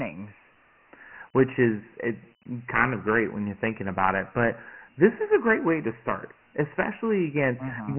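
From start to finish the speech sounds dull and boxed in, with nothing above 3 kHz and a gritty hiss riding on every syllable. This is heavy Dialogic VOX ADPCM damage: coarse 4-bit step coding of each sample, with a band limit that fits a 6,000-sample, roughly 24 kbps file.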